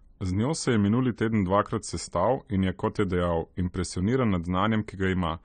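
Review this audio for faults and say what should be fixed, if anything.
Throughout the speech, the sound is dull, with nothing above 9 kHz, and sibilants and sustained vowels carry a warbling, fizzy smear. That points to likely AAC compression at a low bitrate, something like 32 kbps, where the encoder lowers its cut-off and coarsely quantises or noise-fills bands. A plain low-pass filter would also remove the top end but leave no swirling texture. Re-export from the original source at a higher AAC bitrate or in a lossless format.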